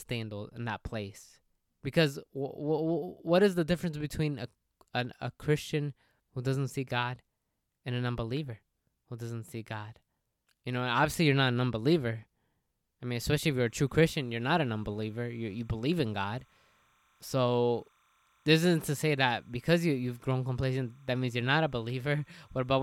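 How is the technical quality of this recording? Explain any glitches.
The speech is marred by one fault in its last stretch. From 13.7 s to the end at 22.8 s there is timecode bleed: linear timecode on a nearby track or cable leaks into the audio path. Its square wave flips between roughly 1 kHz and 2 kHz at a rate that fits 30-frame code, leaving a faint chirping warble about 40 dB below the speech.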